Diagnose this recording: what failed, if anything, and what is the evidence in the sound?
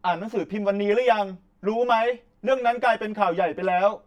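The fault is channel delay with comb filtering, from the driver or buffer stage. One channel arrives roughly 10 ms after the other, which fits a short buffer offset. The two are then summed to mono. The speech sounds hollow and phasey for the whole clip. Cancellation starts near 50 Hz and repeats at evenly spaced points above it, about every 100 Hz. These notches stay fixed. Correlated content between the channels cancels at each one.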